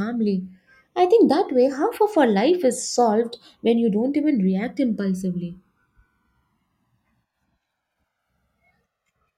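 Throughout the speech, the channels are drifting apart. The two sides run on separate clocks, roughly a couple of hundred parts per million out. Their offset grows to about a millisecond and a half. In mono, sweeping comb notches give a slow flanging.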